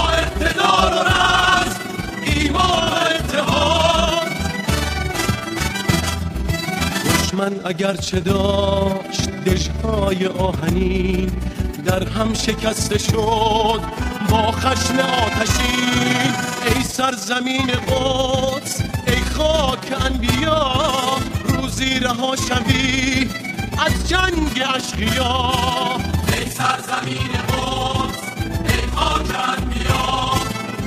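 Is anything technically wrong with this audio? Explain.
Yes. Overlap-add ripple runs through the whole clip. The audio was split into windowed frames and rejoined with an overlap whose gains don't add up to a constant, so the level dips and swells by about 6 dB once per frame, around 20 times a second. That gives a fast, rough flutter. Unlike a deliberate tremolo effect, the pulsing is locked to a fixed frame rate, and unlike dropouts the sound never actually cuts out.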